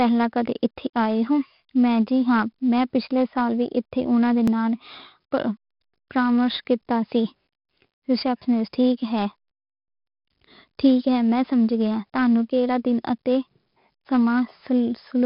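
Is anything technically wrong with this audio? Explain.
Yes. The whole clip has been through 4-bit ADPCM compression, and there are two overlapping-chunk joins.

Throughout, each sample was coded as a coarse 4-bit step from a prediction, at a rate that fits about 44 kbps, so quantisation error rides on the speech as a gritty hiss that grows with loudness. The damage is heavy, and nothing survives above about 5.3 kHz, which leaves the speech dull.

At 4.48 s and again at 14.50 s, the audio was handled in 5-second chunks that each began slightly before the previous one ended. At each join 12 ms of sound repeats, heard as a brief click or stutter.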